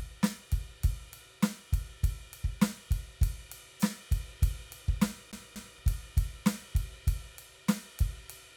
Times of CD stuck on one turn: 5.32-5.79

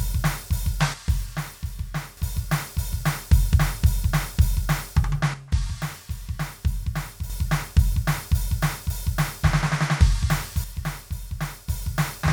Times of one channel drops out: 0.94-2.17, 5.34-7.30, 10.64-11.68

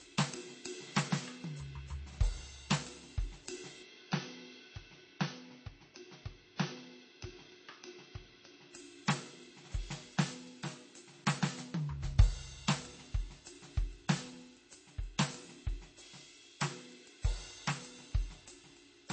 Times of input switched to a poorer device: 3.83-8.73

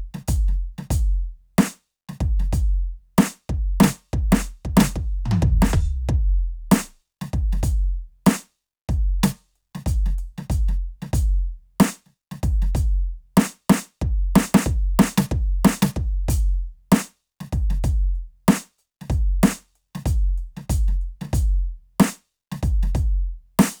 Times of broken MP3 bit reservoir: none

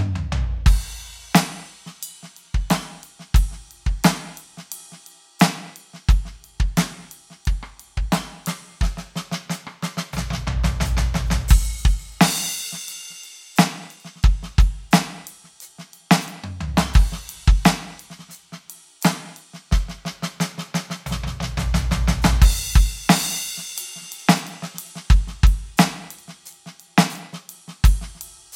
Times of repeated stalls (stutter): none

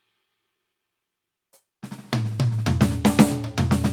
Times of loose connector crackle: none

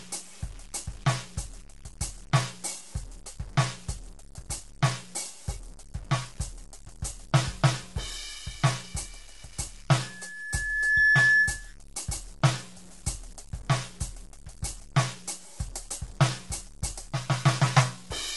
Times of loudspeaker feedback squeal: 9.98-11.77

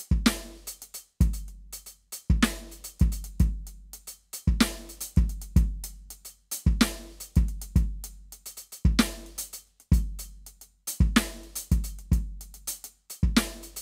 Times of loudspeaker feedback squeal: none

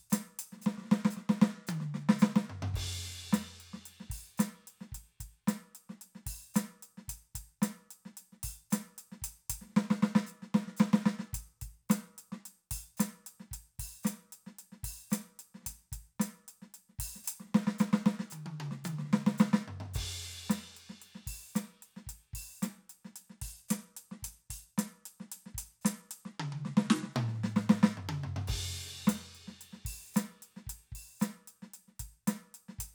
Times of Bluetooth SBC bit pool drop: 23.15-27.13

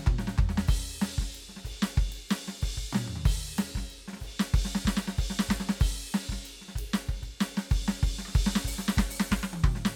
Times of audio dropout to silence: none

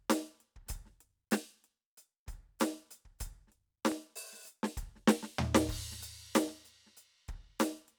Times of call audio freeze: none

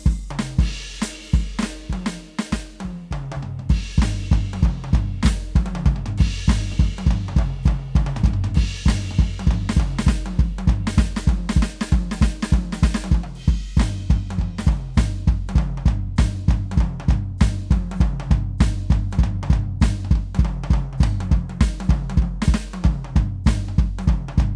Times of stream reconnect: none

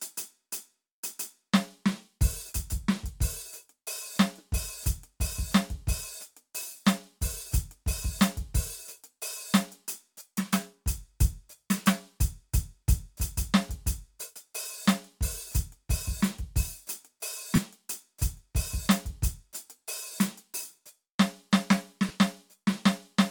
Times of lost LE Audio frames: 17.56-17.58, 20.12-20.14, 22.09

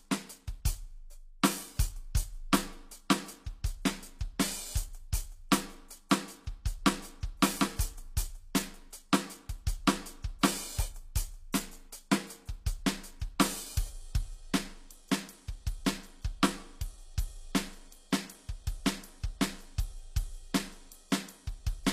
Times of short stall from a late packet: none

